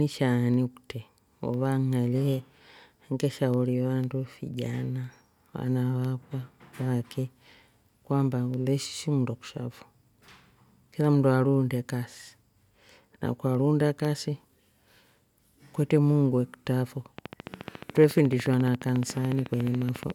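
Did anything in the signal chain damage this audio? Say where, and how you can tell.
Yes. Periodic USB or driver dropouts at the driver or buffer stage: from 0.54 to 14.05 s, roughly every 0.5 s, a tiny sliver of audio becomes silence, ticking only under signal.

A train of clicks, likely interference reaching the analogue wiring, runs from 17.19 to 20.11 s: regular clicks at 14.1 per second, about 10 dB above the signal.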